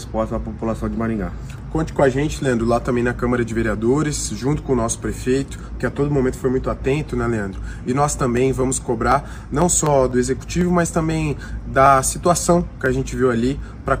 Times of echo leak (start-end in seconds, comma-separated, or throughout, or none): none